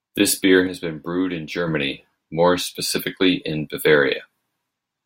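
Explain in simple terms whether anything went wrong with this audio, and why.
From 0.67 to 1.68 s the speech suddenly gets noticeably quieter, then snaps back. That's likely one channel drops out, with one stereo side briefly going silent.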